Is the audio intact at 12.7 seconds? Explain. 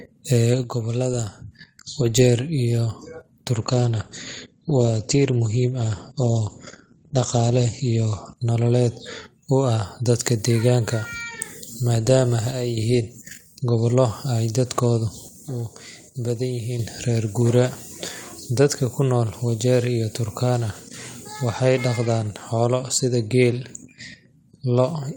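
No. From 12.51 to 12.77 s the speech drops abruptly by about 6 dB and then returns. The likely cause is one stereo channel dropping out: with one side missing, the mono sum carries only half the shared signal.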